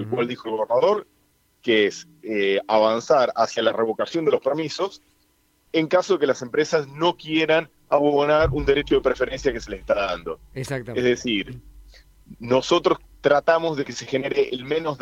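No technical faults are audible.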